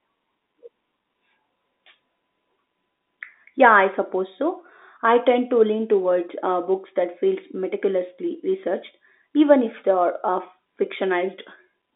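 There are no technical faults to describe anywhere in this speech clip.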